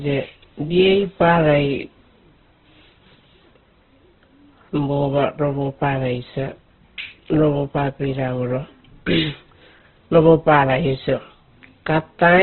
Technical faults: Opus compression

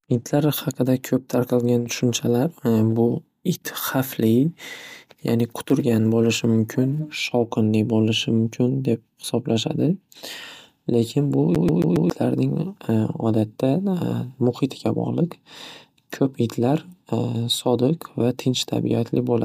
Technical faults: CD stuck on one turn

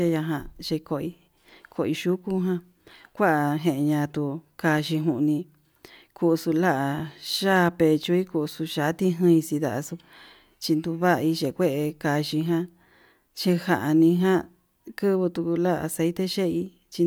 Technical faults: none

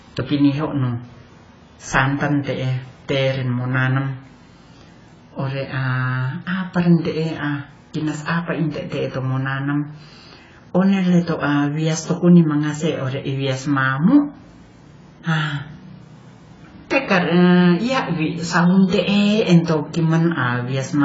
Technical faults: AAC compression

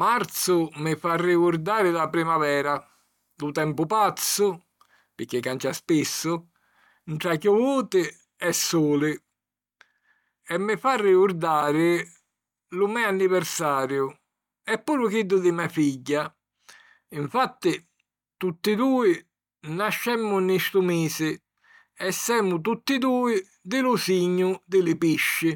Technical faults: none

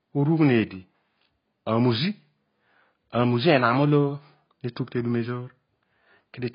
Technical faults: AAC compression

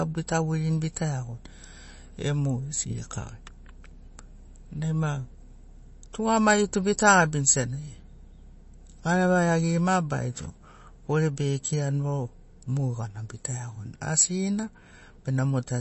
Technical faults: MP3 compression

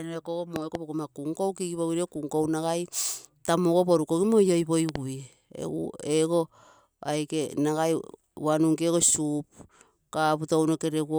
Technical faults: loud pop

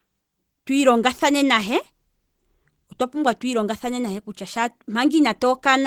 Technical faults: Opus compression

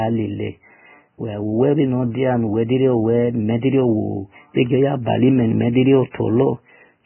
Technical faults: Vorbis compression

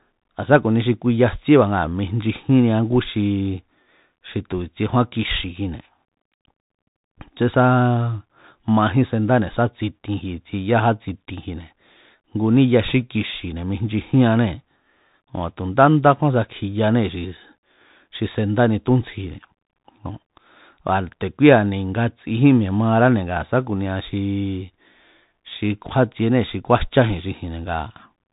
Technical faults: Bluetooth CVSD headset codec

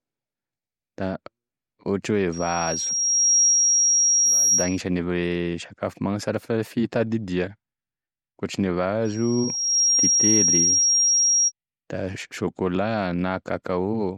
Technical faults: loudspeaker feedback squeal

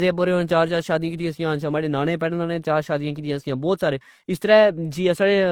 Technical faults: transcoding between lossy codecs

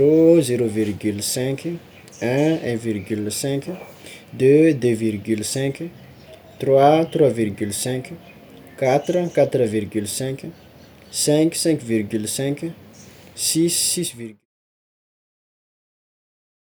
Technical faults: none

